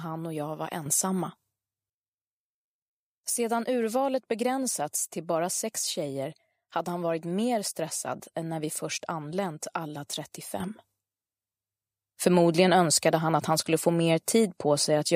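At 0.86 s the level steps up by about 8 dB in a single sample, holds until 1.9 s, then drops back; the same sudden gain jump of about 8 dB returns at 10.6 s and lasts to the end. Sound and background noise rise together, likely from a gain setting applied with no ramp. A waveform shows abrupt, squared-off envelope steps, and a spectrogram brightens or darkens evenly across all frequencies at each edge.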